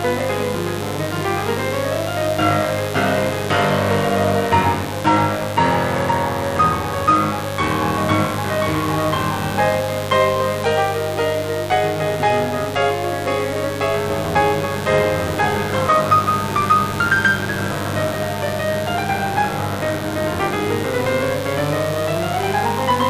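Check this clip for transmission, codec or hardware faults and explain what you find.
There is one fault, a mains buzz that runs under the music for the whole clip. Interference from a 50 Hz supply has got into the signal path. A dimmer, rectifier or unshielded lead of that kind switches sharply twice per cycle, so the buzz carries a dense ladder of 50 Hz harmonics reaching into the low kilohertz. It sits at roughly 10 dB below the music, heard as a steady, raspy buzz. On a spectrogram it shows as evenly spaced horizontal lines at multiples of 50 Hz across the full duration. The waveform carries small periodic spikes every 10 ms.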